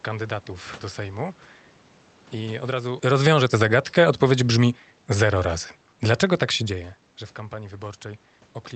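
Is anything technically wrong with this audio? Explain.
Yes, there's one problem. Right after "I od razu", from 3.11 to 5.67 s, the automatic gain is falling. The AGC decided the input was too hot or its background noise too strong, and eased its gain down by about 5 dB, so the speech and the room noise sink together.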